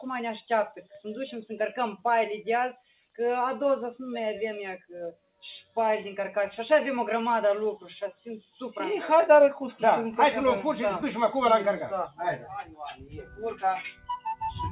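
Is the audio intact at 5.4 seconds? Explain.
No. From 5.12 to 5.43 s the sound is cut by the noise suppressor. A suppressor tuned for speech judged this passage to be noise and pulled it down by as much as about 18 dB, so the sound abruptly sinks and its sustain or decay is clipped short. On a waveform the envelope collapses into a narrow trough for roughly a third of a second. On a spectrogram that stretch fades toward dark while the surrounding material stays bright.

Behind this, the noise suppressor is applied to the music or sounds throughout, and it is active at 5.4 s as well. It keeps riding the gain on steady and fading parts, with swings of around 5 dB, so held material pumps and thins. On a waveform the sustained portions show a wavering, uneven envelope. On a spectrogram the partials and tails flicker in brightness instead of fading smoothly. The call path's bandwidth can be seen too, with nothing above 4 kHz, which fits a G.711 telephone codec.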